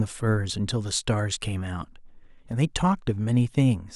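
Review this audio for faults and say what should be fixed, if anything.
Block of digital silence at 2.52 s: a 1.3 ms run of zeros, probably a 64-sample buffer left unfilled in time, cuts the speech abruptly and is heard as a tick or dip. Fix it by giving the audio thread a larger buffer or higher priority so every block is filled before playback.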